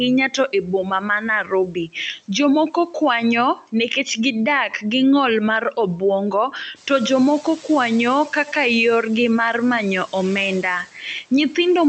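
Speech cut by the noise suppressor at 0.28–1.27, 1.44–1.95, 2.71–2.95 and 3.56–3.75 s: the suppressor treated soft speech as noise and lowered it by about 9 to 11 dB, so those parts sound swallowed and faint.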